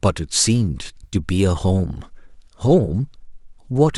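AAC frame loss with concealment occurs at 1.04 to 1.16 s and again at 2.86 to 2.89 s. In the first event, about 70 ms of audio goes missing in a cluster spread over roughly 80 ms, with the longest gap near 50 ms. The decoder fills each hole by reusing the last good spectrum, so the speech turns smeared and phasey there. The second dropout, about 20 ms long, leaves a brief noisy blur. The short gaps suggest the roughly 10 ms frames of a low-delay AAC stream, likely AAC-ELD.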